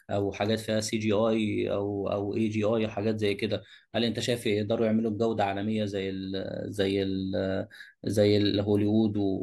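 Sample clock jitter runs throughout. The converter's clock wobbles by about a microsecond, adding a faint hiss, roughly 45 dB down, on louder and brighter speech.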